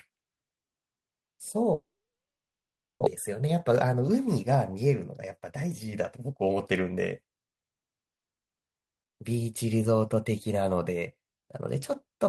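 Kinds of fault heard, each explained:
Long network dropout: The stream likely stopped delivering packets from 1.73 to 3.08 s. The receiver briefly stretched the last sound into a fading buzz or hiss, then about 1.18 s of silence followed, and roughly a second of speech never returned when audio resumed.
Jitter buffer speed-up: After the gap, the receiver held more buffered audio than it wanted and trimmed short pitch-period slices to catch up. From 3.28 to 6.98 s the speech runs about 7% fast at unchanged pitch, shedding roughly a third of a second and sounding hurried.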